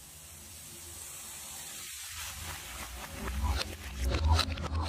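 Nothing stood out as a technical problem on listening.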